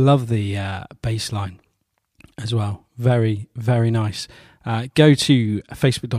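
No technical faults turn up anywhere in the speech recording. There is nothing to mark at any point in time.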